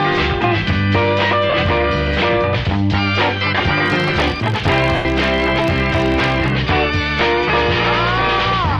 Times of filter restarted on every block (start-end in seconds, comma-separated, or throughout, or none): 3.86-6.54